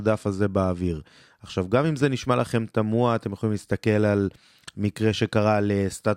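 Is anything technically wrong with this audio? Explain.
No, nothing technically wrong can be heard here.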